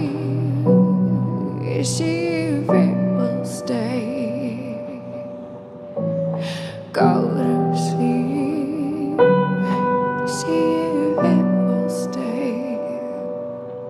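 No technical faults can be heard anywhere here.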